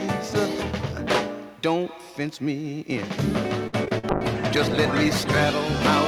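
Repeated packet loss (robotic sound) runs from 3.67 to 4.05 s. The audio breaks up into choppy fragments. Four short holes fall close together, the longest about 54 ms. Each one is bridged by stretching the preceding sound, and about 136 ms of the 0.38 s span is concealed this way, roughly a third of it. Some 80 ms of sound is lost outright, which produces the clipped, robotic texture. A call bitrate drop follows from 4.11 to 5.89 s. The sound becomes rough and watery, and its high frequencies are cut away, leaving it muffled. This points to the encoder being pushed from around 128 kbps down to around 18 kbps after the call's bandwidth estimate fell. The coarse, band-limited coding holds at its worst for about 1.7 s before the bitrate recovers near the end.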